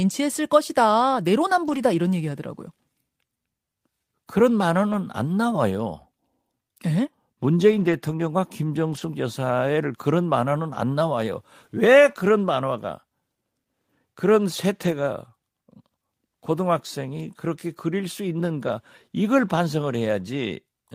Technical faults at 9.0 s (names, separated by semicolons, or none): lost packet rebuilt from error correction